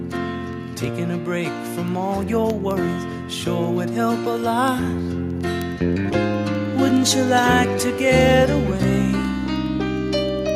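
From 0.12 s to 10.49 s, word clock ticks run through the sound. The receiving clock is not locked to the sender's and drifts by roughly 200 ppm. About ten times a second, one sample slips. Around a hundred steady ticks result.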